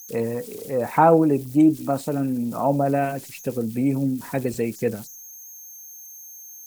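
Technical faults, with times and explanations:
Throughout, converter idle tones: a whistle around 7 kHz sits about 23 dB below the speech, heard in pauses and as grain under the speech. Without dither, the delta-sigma converter falls into repeating bit patterns on small input, and these cycles sound as tones.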